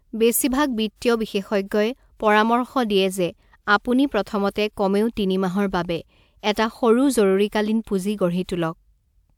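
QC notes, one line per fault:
No technical faults can be heard anywhere in the speech recording, and the signal holds steady in level and continuity throughout.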